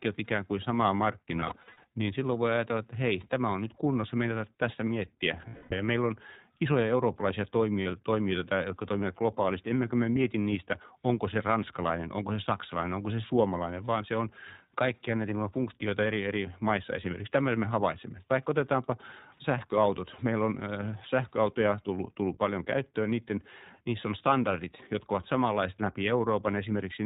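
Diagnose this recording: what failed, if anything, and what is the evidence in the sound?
Codec stage: iLBC codec throughout, rough and slightly synthetic, consistent with its 15.2 kbps mode; the spectrogram shows nothing above 4 kHz.

Network stage: lost iLBC frames at 1.36–1.84 s (scattered, longest run about 70 ms), 5.48–5.74 s and 7.82–7.88 s. The decoder repeats a pitch cycle with noise, giving buzzy held vowels, flat periodic waveform stretches and smeared harmonics.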